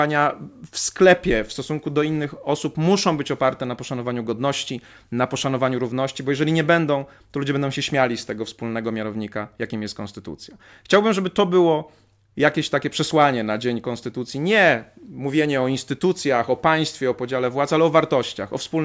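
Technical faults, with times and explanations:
No technical faults are heard in this speech clip.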